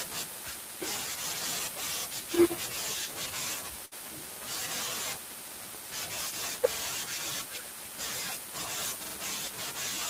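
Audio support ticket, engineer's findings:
Burst of packet loss, 3.85–3.93 s. Speech drops into about 60 ms of concealment (the last sound held and fading to a buzz or hiss), then resumes with about 60 ms skipped. Spectrogram: smeared, decaying band, then an abrupt onset. Likely network jitter buffer.

Repeated buffer at 4.32 s, 6.73 s and 9.06 s, each about 0.09 s long. The same 46 ms slice plays two extra times, heard as a stutter with hard joins and no speech skipped. Waveform: identical blocks tiled back to back, consistent with a 2048-sample playback buffer underrunning.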